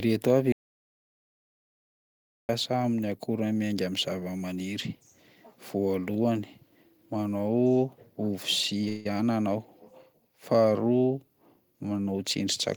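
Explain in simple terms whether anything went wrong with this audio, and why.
Two things go wrong here. First, an audio dropout to silence: from 0.52 to 2.49 s the speech cuts out into total dead silence, no room hiss at all. That's likely the input being lost while recording carried on, so about two seconds of speech are simply gone.

Second, a call audio freeze at 8.88 to 9.06 s: the last sound gets stretched into a brief buzzy smear for about 170 ms, then speech carries on where it stopped. That's likely delayed packets on a call, so nothing's missing, just a short pause added.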